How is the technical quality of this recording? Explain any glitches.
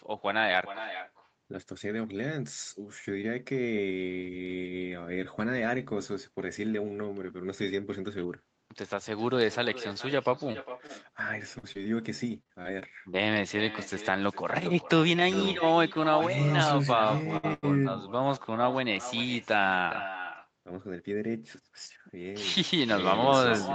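The call has several faults, including a persistent echo and a cluster of packet-loss and late-packet glitches between 9.9 and 17.7 s. The audio tops out at 8 kHz, as expected from the Opus call codec at 24 kbps.

Echo with no canceller: the far end's loudspeaker feeds its microphone and nothing removes it. Throughout the clip, every phrase returns around 0.4 s later, about 12 dB quieter and thin.

Scattered short gaps (9.93–10.91 s): a handful of isolated packets, roughly four, went missing and were patched by extending the preceding sound. Each left a brief tick or smear of about 20 ms at most.

Short concealed packet loss (11.59–11.65 s and 11.73–11.77 s): about 40 ms and then 20 ms never reached the decoder. Concealment filled both holes, leaving a quick smear or wobble.

Repeated packet loss (robotic sound), 12.43–13.15 s: five losses arrive in quick succession, the longest 24 ms. Back-to-back patching turns this stretch choppy, with fragments missing.

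Short stall from a late packet (17.37–17.45 s and 17.53–17.65 s): the jitter buffer emptied twice while waiting for packets. Nothing is lost, but sound is held roughly 64 ms, then 94 ms, too long, with a faint buzz or dip.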